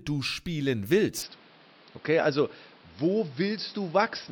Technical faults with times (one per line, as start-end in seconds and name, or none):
1.22-4.32 input switched to a poorer device